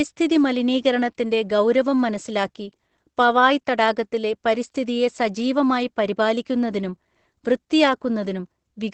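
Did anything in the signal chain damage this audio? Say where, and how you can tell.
Yes. Throughout, the speech sounds muffled, hoarse and faintly robotic, with nothing above 8.6 kHz. That points to the codec stage: Opus voice compression in its SILK linear-prediction mode, held to wideband and coding the excitation coarsely, which fits a bitrate near 12 kbps.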